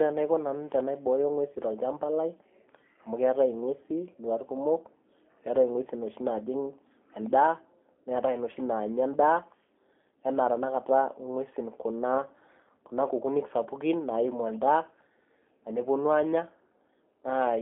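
Speech throughout sounds thin, rough and synthetic, band-limited to 300 Hz to 3.4 kHz: the signature of G.729 codec resynthesis, consistent with an 8 kbit/s stream.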